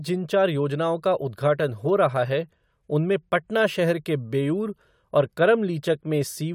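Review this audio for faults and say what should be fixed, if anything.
No faults turn up in this audio, so nothing needs to be fixed.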